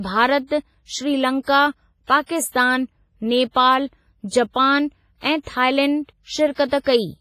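Throughout, the speech sounds washy and ringing, with heavy damage and nothing above 15.4 kHz. This is likely WMA compression at a low bitrate, around 24 kbps.

Pre-echo smears hiss ahead of sharp attacks at 1.43–1.47, 4.28–4.32, 5.43–5.47, 6.56–6.58 and 6.68–6.72 s. Block-wide codec noise fills 22 to 47 ms before each onset.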